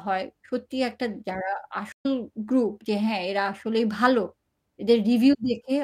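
At 1.92 s the speech cuts to silence for about 0.11 s, then resumes at 2.06 s roughly 150 ms further on. This is a stream reconnect: the connection dropped, and the player reconnected and restarted its decoder at a later point.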